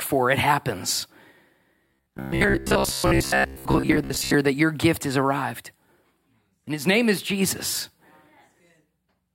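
From 1.87 to 4.34 s the speech turns into robotic sound from repeated short buffers, a stiff metallic buzz near 66.8 Hz, which fits a roughly 15 ms block being looped. Most of the audio is repeated, likely because data arrived too seldom. A spectrogram shows evenly spaced harmonic lines; the waveform shows identical repeating cycles.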